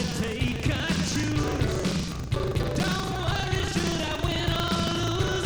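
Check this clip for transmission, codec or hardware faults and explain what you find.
There's one fault, and it runs the whole way through: buffer tearing. The write and read pointers of a playback ring buffer have drifted so they cross inside every period. A slice of each buffer, around 15 percent, is stale audio from roughly 70 ms earlier, spliced in with hard edges. You get a steady robotic rattle at 25 Hz, so a 40 ms period, and it only shows up while there's sound playing.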